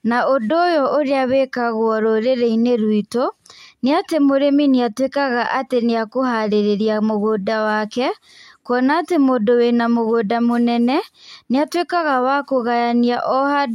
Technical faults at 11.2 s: none

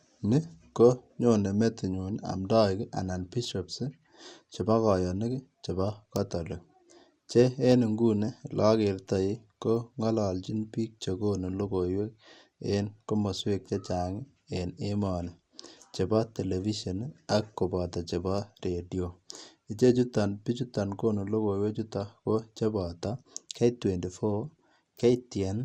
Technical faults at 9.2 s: MP2 compression

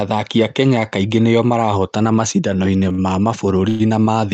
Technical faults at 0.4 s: none

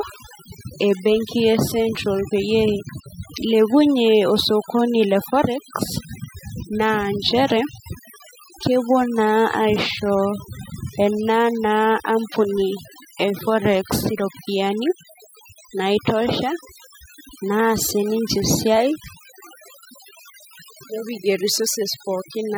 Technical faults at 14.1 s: overdone noise removal

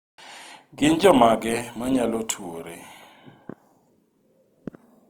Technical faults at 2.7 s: Opus compression

